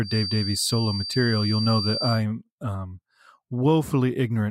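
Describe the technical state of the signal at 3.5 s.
At 3.5 s the speech signal is intact, with no audible technical fault at that moment.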